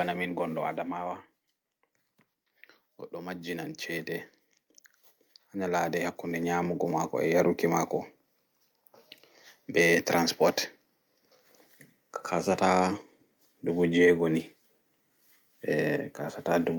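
From 0.05 to 1.5 s you get automatic gain falling. The gain control decided the speech was running hot and pulled its gain down by about 7 dB over that stretch. The voice starts loud and then sinks, and the background drops right along with it.

Then there are two bouts of automatic gain rising, where the control heard too little level and pushed gain up. The first runs 3.13 to 4.17 s, about 4 dB, and the second runs 5.52 to 7.61 s, about 8 dB. Both times the voice and room noise swell together.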